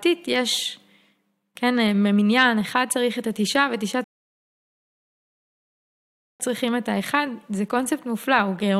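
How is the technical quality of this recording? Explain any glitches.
The speech has one glitch, a rebuffering stall. From 4.04 to 6.40 s the player ran out of downloaded audio and halted, inserting 2.36 s of silence, then resumed exactly where it stopped, with nothing lost.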